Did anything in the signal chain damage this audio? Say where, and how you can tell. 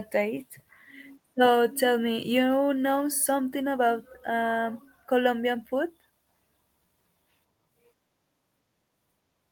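No, nothing along the chain from capture to playback has left any audible mark on this speech recording.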